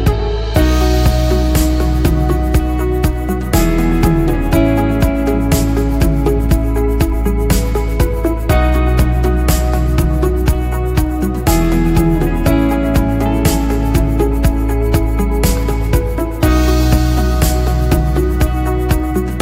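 Nothing here calls for comment, since no technical fault turns up anywhere in the clip.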